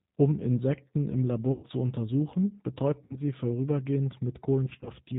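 Throughout, the speech carries G.729 codec damage: at 8 kbit/s the voice is rebuilt from a vocal tract filter and sparse pulses, so nothing above 4 kHz survives and the sound is plainly rough and synthetic. VoIP packet loss concealed by the speech codec follows at 1.52 to 1.65 s, where about 110 ms goes missing, consistent with eleven 10 ms frames. The decoder stretches its last pitch and filter into a buzzy tone or coloured noise that fades. It recurs at 3.04 to 3.15 s with about 60 ms lost. From 4.66 to 4.90 s, gaps totalling 90 ms are scattered across 200 ms, none longer than 20 ms, and leave the speech weak or distorted.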